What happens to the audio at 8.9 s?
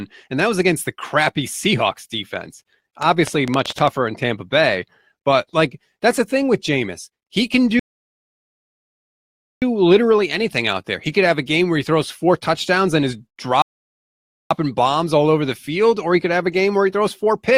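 At 8.9 s the speech sits inside a rebuffering stall from 7.79 to 9.62 s. Playback ran dry and went silent for about 1.8 s. It then resumed exactly where it stopped.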